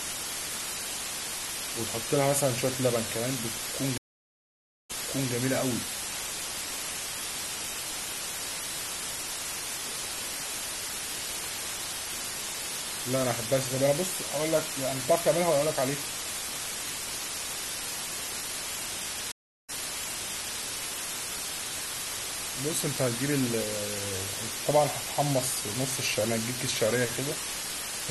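A speech recording carries low bit depth with dither throughout. Rounding to what sounds like only 4 bits, with dither added first, turns the error into a constant, even hiss nearly as loud as the speech itself. On a spectrogram this shows as a dense, flat noise floor across all frequencies, with no distortion harmonics. Two stream reconnects interrupt it. From 3.98 to 5.32 s the waveform drops to a flat line for about 0.92 s, and the speech resumes with a short fade-in, repeating 0.43 s already heard. From 19.32 to 20.60 s a 0.37 s gap is followed by a jump back of 0.92 s, where the same waveform shapes visibly repeat.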